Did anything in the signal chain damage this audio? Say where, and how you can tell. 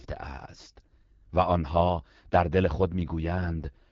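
Yes. The damage comes from the codec stage and runs through the whole speech clip: the AMR wideband (HD Voice) codec at a low rate. Throughout, the voice sounds rough and raspy. Below about 6.4 kHz the speech is rebuilt from a pulse-excited vocal tract model, and above that the codec substitutes synthetic noise. The degree of coarseness fits the 8.85 kbit/s mode, one of its two lowest rates.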